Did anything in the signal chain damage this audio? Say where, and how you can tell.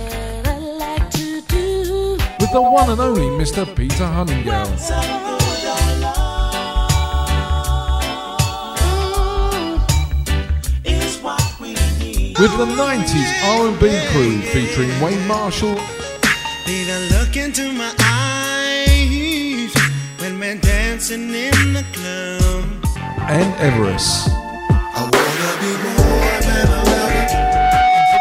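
Yes. A loudspeaker feedback squeal comes from the microphone and speaker loop running above unity gain, at 2.25–2.88 s and from 26.43 s to the end. On a spectrogram it shows as a single 741 Hz line that swells in.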